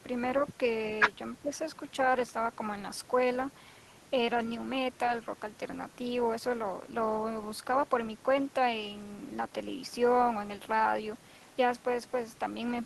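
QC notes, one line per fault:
1.42 to 1.51 s, speech suppressed in double talk: the speech briefly sinks by roughly 10 dB, a short dip lasting about a tenth of a second. The likely cause is an echo canceller meeting simultaneous talk from the far end. Unable to separate the near talker from the loudspeaker echo, it attenuated both together, so the near speech was ducked along with the echo it was meant to remove.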